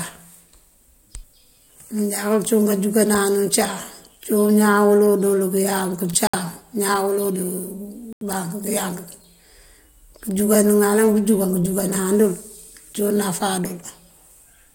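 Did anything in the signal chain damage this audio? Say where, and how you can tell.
Yes, at the codec stage: corrupt frames muted. Just after "dël këëyank", speech cuts to dead silence from 6.27 to 6.35 s, and again from 8.13 to 8.23 s. The gaps fit three and four rejected frames replaced with silence. The waveform flat-lines abruptly, spectrograms show blank full-band columns, and timing stays intact.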